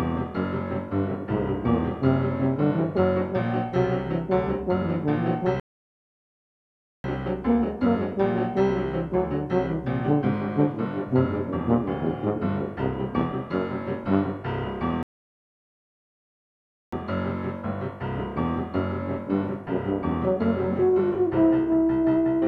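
The player twice ran out of downloaded audio and halted until more arrived, a rebuffering stall each time. The sound cuts to silence from 5.60 to 7.04 s, about 1.4 s, and from 15.03 to 16.93 s, about 1.9 s, then resumes exactly where it stopped.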